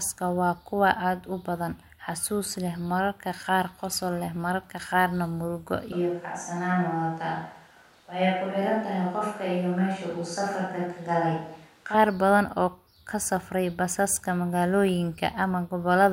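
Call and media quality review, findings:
Sudden roomy, hollow, bass-light speech 5.92–11.94 s, after "leh mararka qaarna murugo"; level unchanged, room noise about 30 dB down. Likely switch to a distant microphone.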